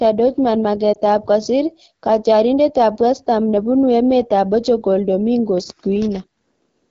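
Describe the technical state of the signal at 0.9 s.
At 0.94 to 0.99 s there is a lost AMR speech frame, just before "ab kosir katyarindet ab". One 20 ms frame failed its checksum over the radio link, so the decoder rebuilt it from the previous frame's pitch and vocal tract settings at reduced gain. The result is a brief dip or warble. Unlike a network packet dropout, there is no hard gap to silence and no click, only a smooth, briefly weakened continuation.

The whole signal also carries the AMR wideband (HD Voice) codec at 8.85 kbit/s, one of its two lowest rates, and the damage is plainly audible. The speech has a rough, raspy texture because the pulse-driven model has too few bits to shape the excitation, and the band from 6.4 to 7 kHz is filled with shaped noise rather than real detail. This raspiness runs through the whole signal, whereas a narrowband codec would sound muffled and cut off near 3.4 kHz.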